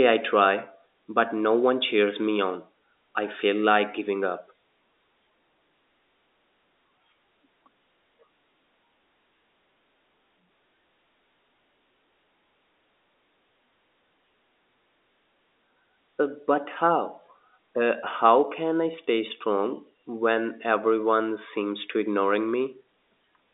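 No faults are present in the speech; the telephone coding band-limits it to roughly 250 Hz to 3.7 kHz, as a normal G.711 line does.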